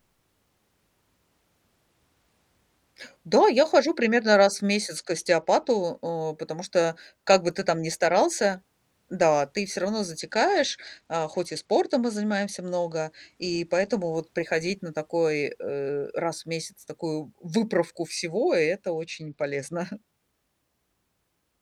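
Speech with three Bluetooth SBC bit pool drops: 4.96 to 5.83 s, after "хожу примерно раз в"; 10.20 to 14.16 s, after "да ты всё равно"; and 18.93 to 19.76 s. Treble dulls and gritty noise rises each time. The link starved the coder, cutting its bit pool from 31 to 13, which points to about 94 kbps.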